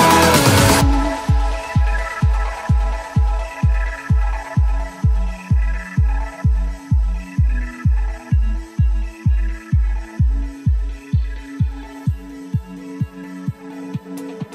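No technical faults are audible anywhere in the clip.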